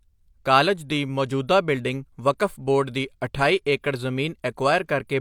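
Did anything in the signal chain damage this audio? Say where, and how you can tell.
No, nothing in the signal chain audibly damaged this speech recording, and no stage left a mark on the signal that a listener can pick out.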